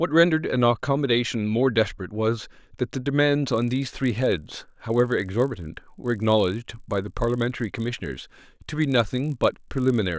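From 3.52 s to the end, a resampler restarted on every block produces a 50 Hz buzz: each 20 ms block, likely converted from 44.1 kHz to 16 kHz, gets edge errors.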